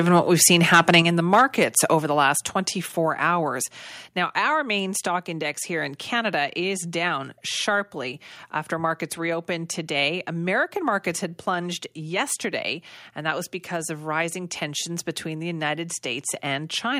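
Right from 0.16 s to 1.0 s the speech has a harsh, crackly edge on its loudest syllables, with peaks pushing about 8 dB past the converter's limit. That's microphone overload, most likely from the input gain being set too high, so the converter shaves off the waveform tops. At 1.02 s, just before "in the", there's a sudden microphone volume step down of about 4 dB, with voice and room dropping together. That's likely the call software pulling the input level back. The crackle returns from 1.33 s to 1.42 s, right after "in the", about 4 dB over with a few percent of samples clipped, and again, more faintly, from 1.77 s to 1.94 s at about 2 dB over. Two more drops follow, at 2.04 s just before "the last" (about 4 dB) and at 3.06 s (about 2 dB).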